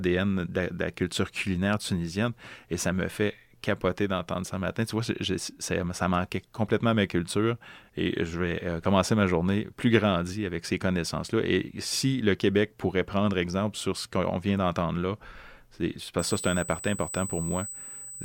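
From 16.19 s to the end of the recording at 18.24 s, a USB whine sits under the speech: a steady, fixed-pitch tone at 8 kHz, strong at about 10 dB below the speech level. The 8 kHz pitch matches the 125-microsecond microframe rate of a high-speed USB bus. The current drawn on each microframe is leaking into the audio path through the power or ground wiring, producing a thin, piercing whistle.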